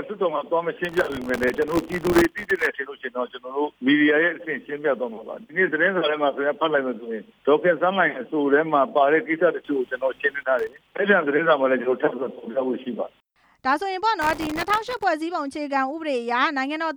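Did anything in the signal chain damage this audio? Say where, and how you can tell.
Yes. Processor overload crackle appears at the driver and buffer stage in three bursts, from 0.85 to 2.66 s, 10.59 to 10.95 s and 14.22 to 15.03 s. Each burst is a gritty tearing laid over the sound, and it stops cleanly when the burst ends. The very fine grain suggests buffers of under a millisecond. The processor missed their deadlines dozens to a couple of hundred times in a row, and each miss replayed a scrap of old audio with hard edges.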